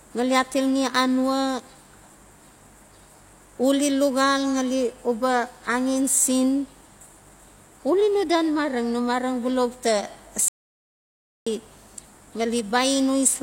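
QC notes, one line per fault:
10.48–11.47 s, playback stall: the speech cuts out in mid-flow and the output falls to silence for about 0.98 s, then picks up again. A hard gap of that length points to the player going quiet rather than the signal itself dropping, most likely because it ran out of buffered data or its audio thread was briefly blocked before it recovered and resumed.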